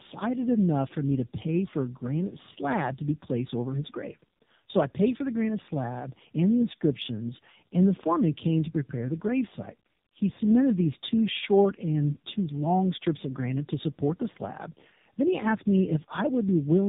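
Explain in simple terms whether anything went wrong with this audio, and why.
Tandem speech coding runs throughout: two different phone speech codecs compressed the speech one after the other, leaving it rough, warbly and muffled, with nothing above 3.8 kHz.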